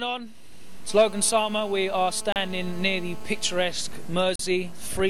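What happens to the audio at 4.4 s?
Right around there, from 4.36 to 4.39 s, there's a gap between stream segments: a hard-edged hole of silence about 38 ms long. It sits at a boundary where one segment's timestamps don't quite line up with the next, which fits segments of about 2 s. The player pads the mismatch with silence, so the sound just drops out abruptly and picks up again. Nothing is actually missing, though. The 37.5 ms of silence is inserted, and everything afterward simply arrives that much later.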